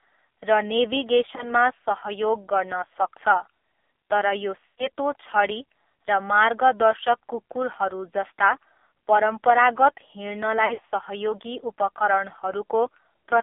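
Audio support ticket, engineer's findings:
Buzzy, synthetic, thin speech throughout; nothing below about 300 Hz or above 3.6 kHz. AMR narrowband mobile codec, heavy damage. Low-rate vocal-tract model with sparse pulse excitation; the coarseness fits a low mode near 5.9 kbps. Narrowband 8 kHz path caps the top.

1.36–1.50 s: brief dip/warble. Lost AMR speech frames, about 20 ms missing, consistent with a single 20 ms frame. Decoder repeated last pitch and vocal-tract settings at reduced gain.

4.66–4.88 s: sound smeared, then fading toward silence, weak on return. Lost AMR speech frames: roughly 120 ms gone, pointing to a run of about six frames. Concealment stretched the last good frame while ramping gain down.

10.66–10.92 s: choppy, repeated dropouts. Lost AMR speech frames: about 140 ms lost, scattered across 240 ms, longest gap 40 ms. Likely bursty radio errors failing frame checksums.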